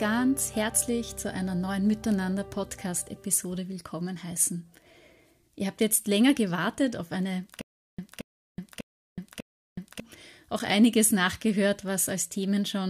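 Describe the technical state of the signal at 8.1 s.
At 8.1 s the playback has likely stalled, replaying its last 225 ms fragment on each retry before running empty. The result is a stutter with silent gaps from 7.61 to 10.0 s: four identical bursts repeating every 597 ms, separated by 372 ms of dead silence, with the intervening audio lost.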